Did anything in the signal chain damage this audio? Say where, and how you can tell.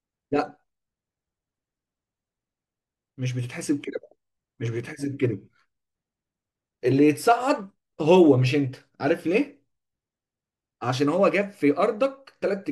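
No, nothing in the chain seems to have done any harm here; it all sounds as it should.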